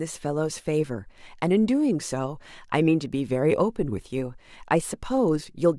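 No technical faults can be heard anywhere in the speech recording. Nothing in the signal chain draws attention to itself at any point.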